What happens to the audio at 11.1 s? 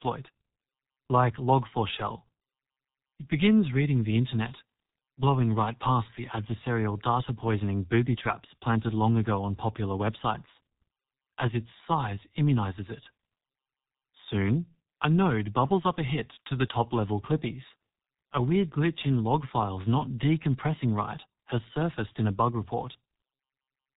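At 11.1 s the speech carries G.723.1 codec damage, present throughout the clip: a spectrogram shows energy cut off flat above 3.8 kHz, and heavy, coarse frame-by-frame coding that fits roughly 6 kbit/s leaves it muffled and hoarse with smeared consonants.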